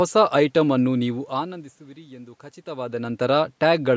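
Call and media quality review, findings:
No faults found in this speech clip. The call microphone processing leaves nothing above 8 kHz, room noise sits in the background, and level shifts around 1 s and 2.5 s come from the talker moving relative to the microphone.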